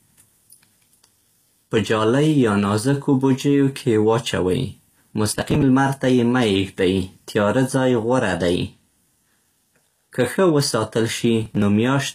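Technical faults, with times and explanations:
throughout: HE-AAC compression. The speech carries plainly audible codec damage, and nothing is present above 14.9 kHz. The treble sounds like it was rebuilt rather than kept. Its harmonics do not line up with the lower band, so the upper range of the speech turns gritty and metallic. This is likely HE-AAC, which codes only the lower spectrum and copies it upward to fill the treble. The damage fits a low bitrate of around 24 kbps.
5.31–5.63 s and 11.43–11.62 s: processor overload crackle. Both bursts sound like a gritty tearing that rides on the speech and then stops. The first ends just before "لمر ته يې مه". The processor kept missing its deadlines, so short buffers were dropped and the sound skipped ahead each time. Every skip leaves a hard edge. The crackle's grain points to buffers of about 10 ms, with roughly twenty missed in the first burst and ten in the second.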